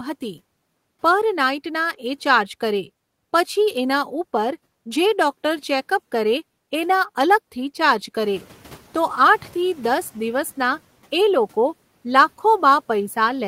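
Noise suppressor catching up, from 8.23 to 10.09 s: after the room noise jumps by about 12 dB around 8 s, the suppressor's noise estimate trails behind, so the noise first passes through under-reduced, then sinks by about 6 dB over 1.86 s.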